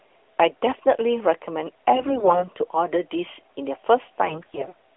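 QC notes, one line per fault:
1.96–2.48 s and 4.26–4.75 s, AMR bit errors: in both stretches the speech goes hoarse and gargly while keeping roughly its pitch and loudness. That points to flipped bits in the less protected parts of the AMR-NB frames, around one bit in ten, which is enough to scatter the excitation pulses and skew the fine pitch, gain and spectral values. The important bits still got through intact, so the decoder played the frames instead of muting them.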